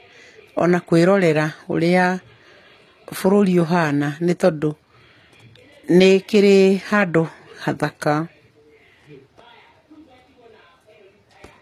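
Speech, with transcoding between lossy codecs audible from start to finish. Nothing remains above 14.7 kHz. Two sets of artefacts sit together: a smeared, swirly top end over a grainier coding texture. The likely cause is an AAC encode followed by a low-rate HE-AAC re-encode.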